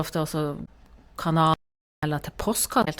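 Speech runs through the clip, and two kinds of fault break it up. Damaged data in a compressed stream shows up twice, from 0.62 to 0.69 s and again from 2.81 to 2.88 s. Each spot is a short blip lasting about 70 ms. Corrupt bytes in the encoded stream stop the decoder from reading those frames. It loses sync and hunts for the next valid frame header, so the sound garbles there. Between 1.54 and 2.03 s comes an audio dropout to silence. The speech cuts off mid-flow and returns about 0.49 s later. The gap is silent, with no room tone underneath. Whatever was said during that stretch is simply gone. The likely cause is a lost input, such as a dropped device link or a momentary mute, while recording carried on writing silence.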